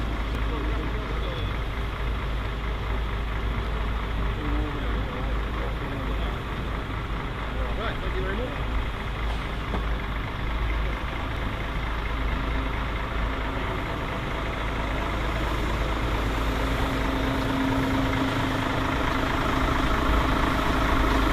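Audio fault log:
0.35 s, 8.94 s, 11.37 s: dropped buffer (overrun). Each is a small jump forward in the sound, around 5 ms lost at 0.35 s and around 10 ms at the other two, most likely because the samples were not read before the hardware overwrote them. The waveform shows a sudden step where two unrelated points join, with no gap of silence. The spectrogram shows a thin vertical broadband line at each time.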